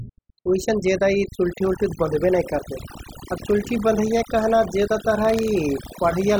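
Overdone noise removal runs throughout the speech. The reduction was set so aggressively that frequency bands near the noise estimate are pulled almost to nothing, taking quiet parts of the voice with them. The background drops and breaks up into twinkling specks.

Buffer tearing appears from 5.20 to 6.04 s, where writing and playback have slipped against each other. A small slice of each buffer replays audio from roughly a tenth of a second earlier, with hard joins, producing a rattling buzz at 21.5 Hz that fits a 2048-sample buffer.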